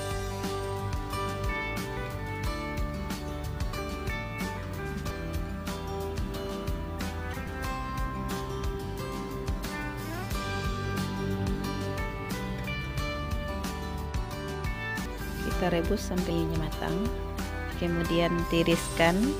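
At 5.10, 7.47 and 15.06 s the audio jumps forward with compressed frames skipped. Whole chunks of the encoded stream never got played, either missing or thrown out by the decoder as damaged. The frames run 32 ms each, so the jumps come in those steps: about 70 ms lost at 5.10, one frame's worth at 7.47, and roughly 150 ms at 15.06.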